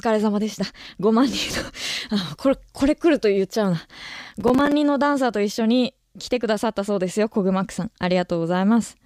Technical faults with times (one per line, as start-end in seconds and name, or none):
4.25-4.72 processor overload crackle